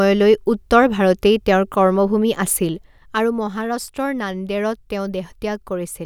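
No technical faults can be heard in the speech. Where the level rises or falls, it moves gradually, as a fader would.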